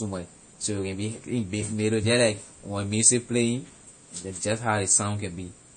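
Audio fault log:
throughout, MP3 compression: treble cut above 9 kHz and weak components flickering frame to frame give a watery sound, likely a bit-starved encode near 32 kbps.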